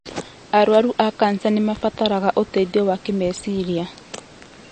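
MP3 compression runs throughout: plainly audible codec damage with nothing above 8.6 kHz, likely from low-bitrate encoding, which fits around 40 kbps. Weak components drop out frame to frame, and the treble is cut. Channel delay (comb filtering) appears from 1.77 to 2.88 s: one channel lags by roughly a sample before the mono sum. The first cancellation notch falls near the top of the audible range, so the top end only dulls briefly.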